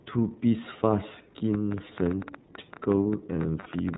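A speech recording, band-limited and slightly rough and synthetic throughout, with nothing above 4 kHz. This is iLBC codec damage, plainly audible. The narrowband VoIP codec codes each frame's excitation independently, and the texture fits its 13.33 kbps, 30 ms frame mode. From 1.54 s to the end at about 4 s, a train of clicks ticks over the speech and the pauses: roughly twenty similar pops at an irregular pace, averaging about 9.5 per second, with peaks a few decibels above the speech. The likely cause is interference from nearby equipment or a faulty connection. Between 3.59 and 3.67 s the sound turns into a held, faintly buzzy vowel lasting 60 ms. These are lost iLBC frames, probably two 30 ms frames, which the decoder concealed by repeating the last pitch cycle with added noise before recovering immediately.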